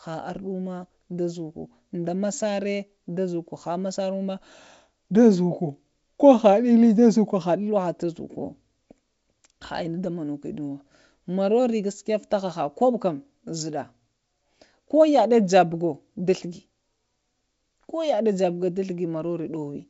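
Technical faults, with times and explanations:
No technical faults heard.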